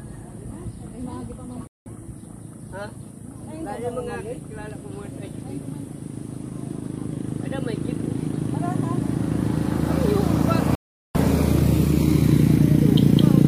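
Bluetooth dropouts at 1.67–1.88 s and 10.75–11.16 s: the sound cuts to silence for about 0.19 s, then 0.39 s, likely from late, discarded packets, and resumes further along.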